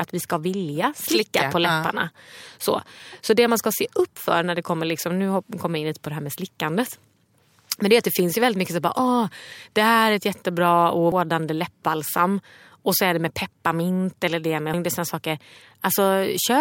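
Damaged data in the compressed stream shows up at 11.12 s, after "här är ett jättebra", and again at 14.74 s, after "pepparmint eller det med". Each time, corrupted bytes throw the decoder off its frame sync, producing a brief chirp, squawk, click or short hole as it jumps to the next readable frame.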